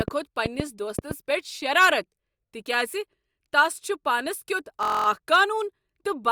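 A speech recording opens with a train of clicks running from 0.01 to 1.12 s. There are roughly seven of them, about 4.5 per second, at an uneven pace. Each pop has much the same shape and stands well above the speech, by something like 15 dB. They tick through the pauses as well as the talking. The likely cause is electrical interference or a faulty connection or power supply injecting repeated pulses. From 4.83 to 5.06 s there is a system hang loop. The machine stalled while the hardware kept replaying its ring buffer. One 23.2 ms slice repeats exactly ten times. At that length the loop rate is 43.1 Hz, so it comes across as a short, steady buzz rather than a stutter. The period fits a 1024-sample buffer. Little or no speech appears to be lost.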